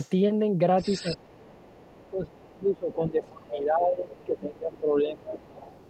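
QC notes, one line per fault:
0.0–0.1, 0.78–1.24, 1.64–3.6, 4.14–4.39, 4.75–4.79, 5.39–5.88 s: other side's voice leaking through, second-voice harmonics roughly 15 to 35 dB under the speech, likely residual loudspeaker echo the canceller missed.
1.02–5.4 s: speech suppressed in double talk. The talker's envelope dips unevenly, up to about 25 dB, with dark spectrogram gaps across four seconds, likely the canceller ducking both voices.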